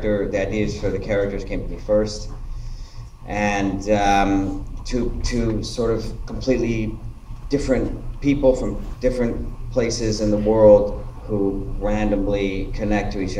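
No technical faults are audible.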